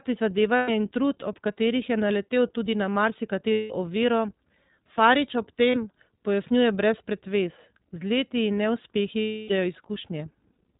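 The whole clip has been through the iLBC codec, and the damage is plainly audible. Everything above 4 kHz is gone, so the speech sounds narrowband and a bit rough and synthetic, the way a low-rate speech coder rebuilds the excitation rather than the waveform. The quality fits iLBC's 15.2 kbps mode with 20 ms frames, where each frame is coded on its own without relying on the one before.

On top of that there are four spots of lost iLBC frames, at 0.56–0.70 s, 3.52–3.72 s, 5.70–5.76 s and 9.20–9.52 s. In each, packets went missing and the decoder filled the hole by repeating the last pitch cycle mixed with noise. You hear a held, slightly buzzy, breathy vowel instead of the real sound. The 5.70 s one is very short, about 40 ms. The last and longest, about 300 ms, fades as the concealment runs on. Because the frames stand alone, the speech snaps back right after each gap.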